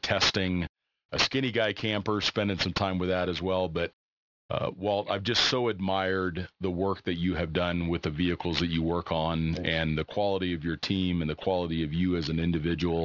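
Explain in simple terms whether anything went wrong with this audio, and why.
Across the whole 13 seconds, the s and sh sounds in this speech come out gritty and metallic, with odd whistly tones that don't belong to the voice. This is aliasing. The recording was squeezed down to a much lower sample rate, which fits a drop to about 12 kHz, without first removing the high sounds it couldn't hold. Everything above 6 kHz folded back down as fairly loud false tones.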